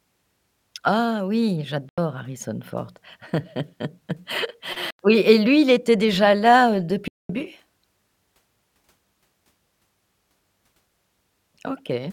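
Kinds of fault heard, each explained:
Bluetooth dropout: the speech goes silent for about 85 ms at 1.89 s and again at 4.90 s, then for 213 ms at 7.08 s just after "était déjà là heu". Each time it resumes further along, as though it had kept playing. The likely cause is audio packets reaching the headphones too late and being discarded.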